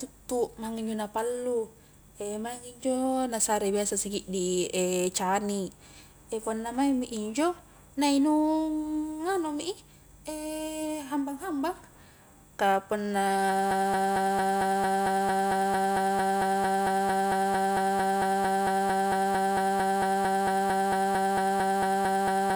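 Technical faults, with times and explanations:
13.71 s to the end, broken-record loop: after "ka punna", an identical 225 ms fragment repeats back to back to the end, likely a stalled stream, not a stutter or echo.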